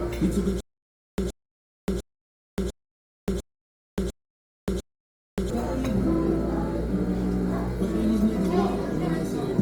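Across the whole recording the sound has a rough, grainy texture, with tones turned noisy rather than swirling, and content reaching to about 20.2 kHz. This likely comes from Opus compression in its music mode, which fits a rate near 24 kbps.

From 0.60 s to 5.50 s a stutter with silent gaps occurs. The same 122 ms fragment repeats seven times, each followed by about 577 ms of digital silence, on a steady 700 ms cycle. This likely comes from a stalled stream replaying its last buffer on each retry. The dead-silent gaps distinguish it from a plain loop, and the repeats distinguish it from simple dropouts.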